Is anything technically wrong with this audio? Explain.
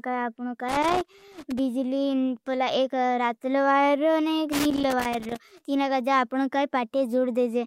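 Yes. Two irregular bursts of crackle and scratching break into the speech, from 0.69 to 1.59 s and again from 4.52 to 5.61 s, each lasting roughly a second. This is loose connector crackle: a worn or dirty contact somewhere in the cable path is making and breaking rapidly as it shifts, chopping the signal on and off, with any DC on the line adding sharp pops each time the contact closes.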